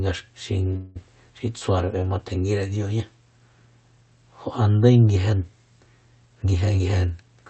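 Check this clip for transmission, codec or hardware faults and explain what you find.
Two faults stand out in this speech, heard through a call codec whose audio stops at about 8 kHz.

From 0.76 to 0.97 s there is a call audio freeze. The last sound is stretched into a short buzzy hold lasting about 0.19 s. The speech then resumes where it stopped, so nothing is lost. Delayed packets likely emptied the jitter buffer.

From 6.27 to 7.45 s comes a jitter buffer speed-up. The speech runs at about 112% speed with unchanged pitch and sounds hurried. The receiver was holding too much audio. It trimmed many small pitch-period slices, removing roughly 150 ms in total, to cut the delay.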